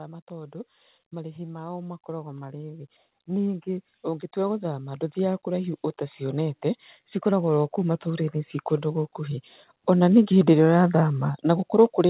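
From 0.27 s to 6.63 s the whole speech clip swells steadily, voice and background noise rising together by about 12 dB, and a second, gentler swell of about 6 dB follows from 7.23 s to 10.76 s. This is automatic gain rising: the gain control judged the input too quiet and ramped its gain up over several seconds, lifting everything at once. The narrow telephone-band sound, with nothing above 4 kHz, comes from the G.711 call path.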